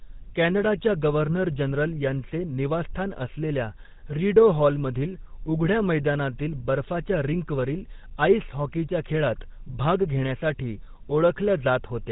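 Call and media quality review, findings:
GSM full-rate codec on the speech path, whole clip. Vocal-tract model driven by regularly spaced pulses, excitation kept at one sample in three, consistent with 13 kbps full rate. Nothing above 4 kHz; plainly audible buzzy, gravelly roughness throughout.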